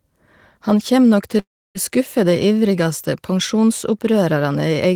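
From 1.39 to 1.78 s, after "kjem nok", a fading buzz gives way to silence until "skuffe dei ivrigaste": likely a long network dropout.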